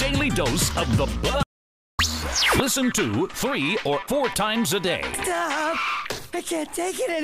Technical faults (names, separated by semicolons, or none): audio dropout to silence